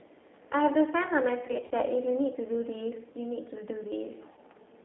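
The whole clip passes through the G.729 codec at 8 kbit/s, which rebuilds speech from a vocal tract filter, a pitch predictor and a few pulses per frame, all inside a line band of roughly 300 Hz to 3.6 kHz. The damage is plainly audible. Everything above that band is gone, leaving the speech thin and muffled, and the pulse-built excitation gives it a rough, slightly synthetic edge.

From 1.47 to 1.73 s, VoIP packet loss concealed by the speech codec sets in. About 100 ms of audio goes missing, scattered across 240 ms, with the longest gap 40 ms, which points to around five lost packets. For each gap the decoder stretches its last pitch and filter while lowering the gain, so the sound turns briefly into a fading buzzy tone or coloured noise in several patches. At 4.33 to 4.39 s, about 40 ms is lost and concealed the same way, producing short, smeared, weakening buzz or noise.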